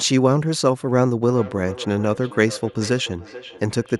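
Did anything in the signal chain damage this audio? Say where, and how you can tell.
Yes: from 1.22 s to the end the speech returns about every 0.4 s, thinner and ringing, at about 17 dB below the voice. That is feedback echo between two devices.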